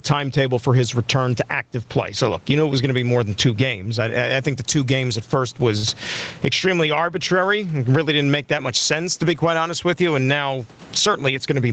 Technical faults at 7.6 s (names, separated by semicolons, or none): gain pumping